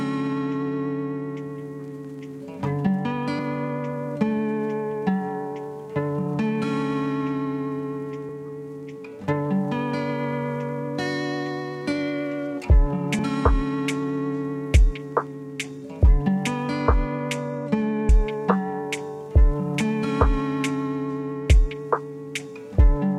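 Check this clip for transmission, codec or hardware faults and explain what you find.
One fault is audible: a single skip where a short stretch of audio is missing.

Audio missing between chunks, at 18.09 s. The sound jumps forward with no gap of silence, as if about a tenth of a second has been cut out and the two sides spliced together. The likely cause is a recorder or processor handling the audio in 5.0-second blocks and dropping a short piece while closing one block and starting the next, so the material on either side of the boundary butts straight together.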